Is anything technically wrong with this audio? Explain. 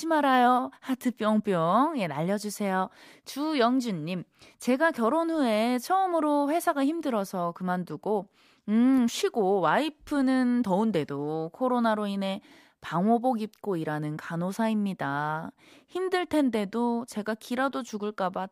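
No, nothing technically wrong can be heard in this speech clip. No fault of any kind turns up anywhere in the recording.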